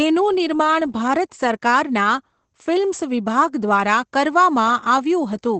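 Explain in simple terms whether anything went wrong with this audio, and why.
Yes, something's off: the whole clip, from start to finish, has Opus voice compression damage you can plainly hear. The codec squeezed the speech hard, chopping off everything above about 8.5 kHz and roughly approximating the rest, so voices sound muffled, a bit hoarse and slightly robotic.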